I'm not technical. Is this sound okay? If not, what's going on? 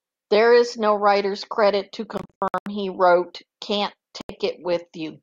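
No. Bluetooth dropouts cut the speech at 2.17–2.66 s, in several short gaps of up to 81 ms, and again at 4.21–4.30 s. Chunks of sound likely arrived at the headphones too late and were skipped, so the speech jumps ahead after each hole.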